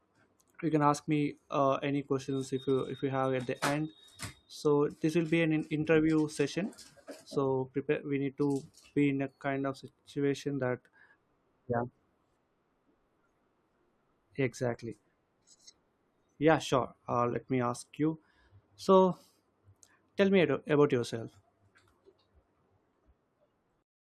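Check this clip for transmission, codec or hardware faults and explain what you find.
No transmission, codec or hardware problems can be heard anywhere in the recording, and the speech signal stays continuous and intact throughout.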